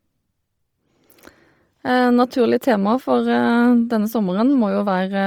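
From start to finish the speech carries a breathy, grainy edge, with the top end replaced by a hiss-like wash, which points to heavy Bluetooth LC3 compression, likely at a low rate around 32 kbps, where the codec drops upper detail and fills it with noise.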